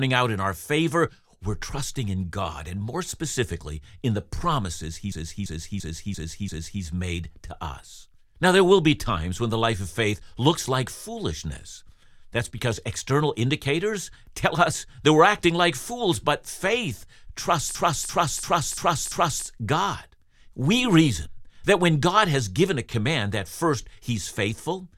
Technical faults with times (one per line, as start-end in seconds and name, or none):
5.12-6.83 system hang loop
17.75-19.46 system hang loop